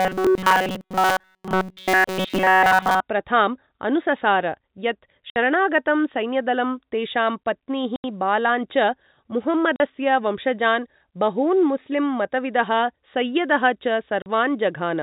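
Right from the start, 0.0 to 3.0 s, the speech has that robotic sound from repeated short buffers: a rigid metallic buzz at 188 Hz, most likely a tiny chunk of about 5.3 ms being replayed over and over while nearly all the real audio gets skipped.

Later there's packet loss filled with silence, with hard-edged holes at 5.30 s (60 ms), 7.96 s (80 ms), 9.76 s (40 ms) and 14.22 s (40 ms). The gaps are all multiples of 20 ms, which points to 20 ms packets dropping out. The telephone-band sound, nothing above 4 kHz, fits the G.711 coding.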